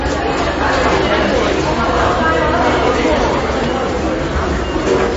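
From start to finish, the audio carries MP3 compression damage, plainly audible and likely from a low-bitrate encode, which fits something around 32 kbps. Nothing reaches above about 7.5 kHz, so the top end is missing, and weak frequency components flicker in and out between frames, giving a watery, swirling texture with metallic chirps on bright sounds and smeared attacks. A simple low-pass filter would dull the sound just as much but leave it smooth, without that shifting, bubbling residue.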